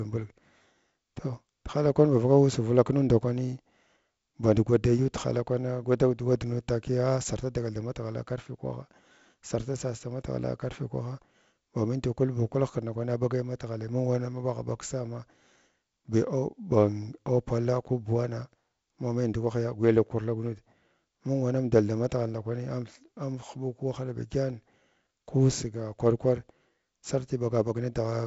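No technical faults are audible in this recording.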